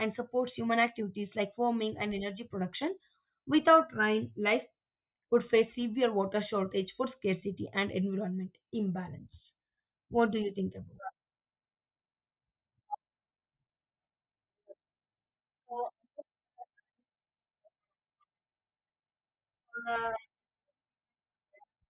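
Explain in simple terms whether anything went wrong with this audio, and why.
Nothing went wrong here, as far as the ear can tell; the speech just carries on without any hiccups or anything that sounds out of place.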